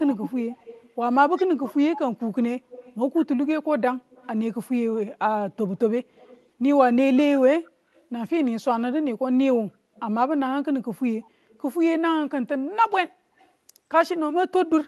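Right from the start, 0.02 to 1.98 s, there's an echo leak: a faint copy of the speech trailing about 135 ms behind, roughly 15 dB down, likely from a far-end speakerphone whose echo canceller didn't fully scrub its mic. It comes back weaker at 2.69–3.26 s (about 20 dB down), then as scraps around 30 to 35 dB down at 4.1–4.27, 6.15–6.49, 7.66–8.05, 9.95–10.01, 11.49–11.61 and 13.39–13.5 s.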